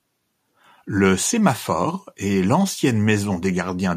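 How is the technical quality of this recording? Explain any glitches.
No glitches or dropouts can be heard anywhere in the recording, and the speech comes through without any audible technical fault.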